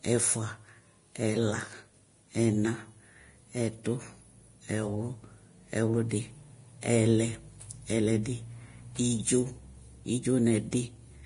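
The speech has most likely passed through heavy Vorbis compression at a low bitrate, which fits a stream of roughly 30 kbps. Throughout the clip the encoder has discarded everything above 10.6 kHz and coded the remaining treble so coarsely that its fine structure is replaced by noise of similar energy. The upper range therefore sounds hissy and grainy, tones turn rough, and consonant attacks come across blurred rather than crisp.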